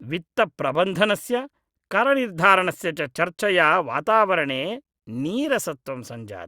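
On listening, nothing in the recording stood out as a technical problem.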